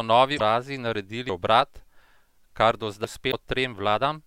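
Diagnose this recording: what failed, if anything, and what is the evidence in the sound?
Two bursts of damaged data in a compressed stream point at the codec or storage stage. At 0.35 to 0.41 s and again at 3.28 to 3.33 s there's a brief glitch, each about 54 ms. That's the decoder reading corrupted frames, losing sync and hunting for the next valid frame header, so a short stretch comes out as garbage.

The other fault sits in the driver or buffer stage: audio missing between chunks. At 1.29 s and 3.04 s the speech jumps forward abruptly with no silence in between, and roughly 300 ms of it is gone each time. The cause is likely a recorder handling audio in 2 s chunks and dropping a piece while it closes one chunk and opens the next, then butting the two edges together.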